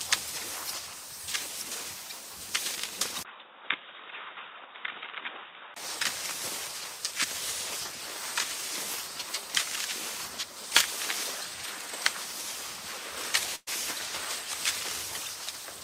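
A recording of everyday sounds. From 3.23 to 5.76 s it turns dull and slightly quieter, with a brief 20 ms gap at the switch, most likely the input switched to a poorer device. The spectrogram shows everything above 3.8 kHz cut off, over a faint new noise floor. At 13.55 to 13.69 s a burst of packet loss fills about 114 ms with a fading continuation of the last sound, followed by roughly 30 ms of silence. About 120 ms of audio is skipped, which appears in the waveform as a decaying smear before a flat gap.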